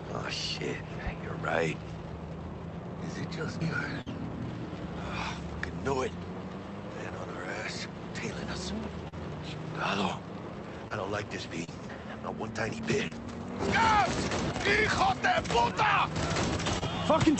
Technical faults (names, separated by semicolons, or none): loud pop; burst of packet loss; short concealed packet loss